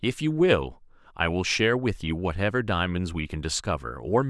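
No technical faults can be heard anywhere in the recording; the signal stays steady and intact throughout.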